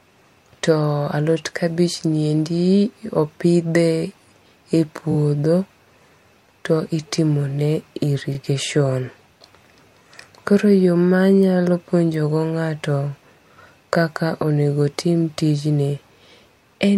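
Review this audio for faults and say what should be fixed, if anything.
Repeated frames make the speech stutter at 5.11–5.16 s, where a 23.2 ms block plays three times and adds 46 ms. They recur at 8.34–8.37 s, where a short run replays once and adds 29 ms. A dropout leaves a gap, but here the same audio plays again. Make the writer and any retransmission path deliver each compressed frame exactly once.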